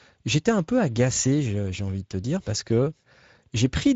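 From start to finish the speech carries Speex codec damage: a hoarse, grainy edge that fits a middling Speex bitrate, and nothing at all above 7.7 kHz.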